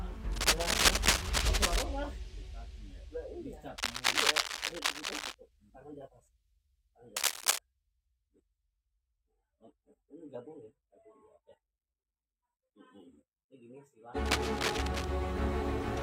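A worn cable or connector being moved likely caused the scratch noise at 0.32–1.84, 3.78–5.35, 7.16–7.59 and 14.25–15.05 s: rough, uneven rustling, slightly louder than the sound, matching it in the last burst.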